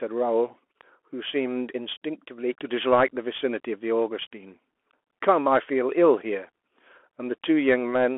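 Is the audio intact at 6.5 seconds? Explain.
No. At 6.5 s, as across the whole clip, the speech passes through a Bluetooth CVSD headset codec: one-bit delta steps at 64 kHz confine it to roughly 300 Hz to 3.4 kHz, with nothing above 3.8 kHz. A grainy hiss and scratchy, overloaded s sounds set it apart from a clean telephone-band filter.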